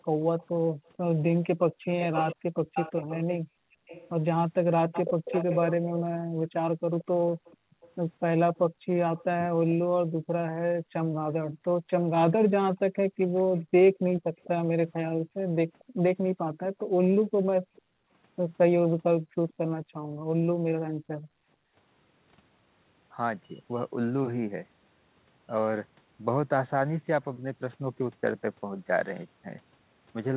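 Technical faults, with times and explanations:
0.04 to 21.74 s, background gated by the echo canceller: the canceller clamped the microphone while the far end played, so room sound drops by up to about 40 dB, roughly ten seconds in all.
0.39 to 9.45 s, echo leak: likely residual loudspeaker pickup escaping the canceller, heard as a delayed copy of the speech 449 ms behind, about 10 dB down.
13.36 to 17.82 s, echo leak: likely the same incomplete cancellation, again a 449 ms delayed copy, now much fainter at about 25 dB below the speech.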